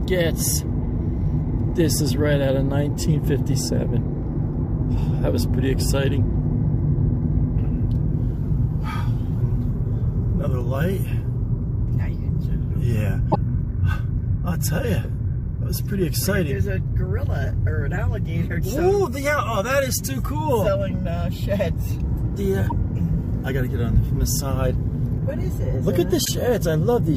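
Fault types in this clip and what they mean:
Damaged data in a compressed stream: corrupted bytes throw the decoder out of sync, causing 70 ms blips at 13.3, 22.7 and 26.2 s, seen as brief broadband smears on a spectrogram.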